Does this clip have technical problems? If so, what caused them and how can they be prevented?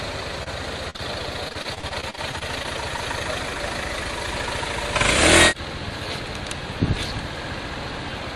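Yes. Short concealed packet loss at 0.43, 0.90 and 0.96 s: brief smears where 20 to 40 ms went missing and the last sound was extended. Unlike a dropout, nothing goes silent. A larger jitter buffer and a more stable network would prevent it.

Repeated packet loss (robotic sound) from 1.48 to 2.66 s: about a dozen patched gaps, up to 45 ms each, covering roughly a fifth of the stretch and giving a choppy texture with pieces missing. The isolated smears stand alone, but these come back to back. Forward error correction and a less congested connection would prevent it.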